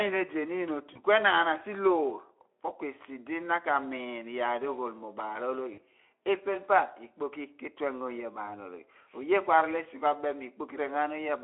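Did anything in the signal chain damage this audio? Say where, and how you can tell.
Yes, at the network stage: VoIP packet loss concealed by the speech codec. The Speex-coded speech drops out briefly at 0.93–1.00 s, 5.73–5.79 s and 8.45–8.51 s. The decoder stretches the last sound into a fading buzz, which fits one, two and one lost 20 ms frames.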